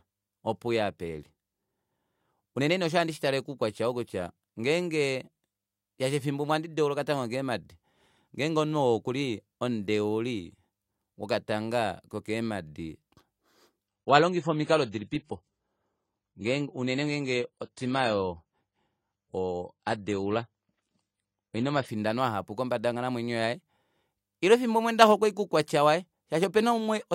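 From 13.88 to 21.88 s the adaptive stream is at a lower bitrate. The speech suddenly loses everything above 9.9 kHz and turns swirly, which fits something like 24 kbit/s AAC, before "ahapu kombada yonghalamwenyo yaye".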